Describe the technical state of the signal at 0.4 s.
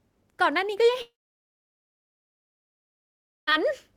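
The signal at 0.4 s is intact, with no technical fault audible at that moment.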